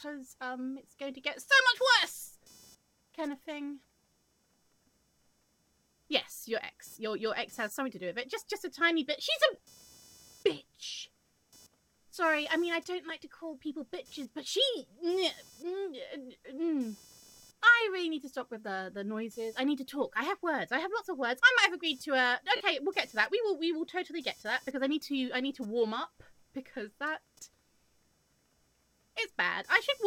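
Running under the whole recording is computer activity noise: a buzzing chirp pulsing at roughly 500 Hz, sitting around 30 dB below the sound. Its source is the audio circuit's shared ground shifting as processor, graphics or mouse load changes, so the buzz rises and falls with the computer's activity rather than with the audio. On a spectrogram it appears as a faint comb of lines at about 500 Hz and its harmonics, flickering on and off independently of the program material.

Lost LE Audio frames first hit at 7.74 s, a single 7.5 ms gap. At 9.54 to 9.60 s a cluster of dropouts totalling 37.5 ms is scattered across 60 ms, the longest run roughly 15 ms. Another 7.5 ms loss falls at 13.09 s, and at 22.56 to 22.61 s a continuous 45 ms stretch drops out. Each 7.5 ms unit fits the LC3 frame length used by Bluetooth LE Audio. When a frame goes missing, the decoder conceals it by reusing the last spectrum with randomised signs and fading it over successive frames. 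Tones therefore smear into brief noisy hiss, and the 45 ms stretch sinks toward silence before the signal returns. On a spectrogram these show as short vertical bands where clean harmonic lines blur into broadband grain. The waveform shows matching patches of noise-like fill whose level sags across the longer gaps.

The light lossy coding on the stream leaves at most a faint watery texture on noise and attacks.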